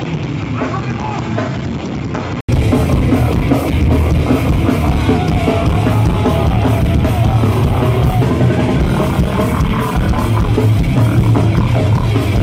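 From the start to 2.49 s the sound is dull and boxy, with nothing above 7.6 kHz, somewhat quieter, and carrying a faint background noise of its own. An 80 ms silence follows, and then the sound opens up. This points to an input switched to a poorer device, likely a change of microphone or headset profile. Unlike a simple low-pass filter, the tone, level and noise floor all change together, with a gap at the switch.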